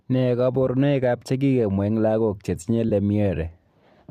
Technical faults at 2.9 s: AAC frame loss with concealment

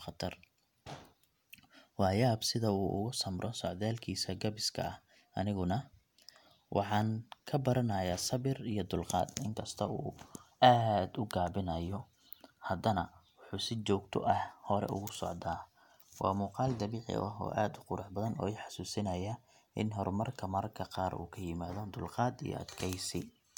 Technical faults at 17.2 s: none

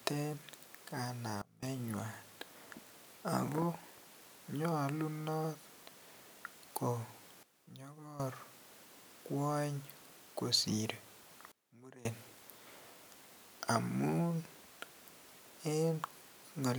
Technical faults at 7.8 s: sudden gain jump

